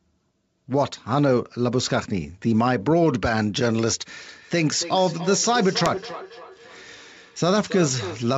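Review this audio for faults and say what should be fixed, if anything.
Feedback echo between two devices runs from 4.23 to 8.3 s. Each phrase returns roughly every 300 ms, thinner each time, peaking about 13 dB below the speech. A second device in the room is replaying the call into this microphone, and neither echo canceller can remove the other's output. Mute or remove the second device, or use headphones on it.

Bit errors on an ADPCM link appear from 5.86 to 5.97 s as pops and a rough burst with brief level jumps. The damage spans about six frames at a low error rate, around a third of a percent. Each flipped bit also knocks the decoder's step size and predictor off course, so the damage rings on briefly. The wideband G.722 coding itself sounds clean at 64 kbit/s. Improve the link's signal quality or add error protection to the link.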